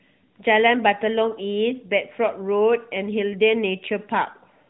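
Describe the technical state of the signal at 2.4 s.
At 2.4 s the speech is intact, with nothing there beyond the narrow, telephone-band sound of the AMR narrowband mobile codec it passes through.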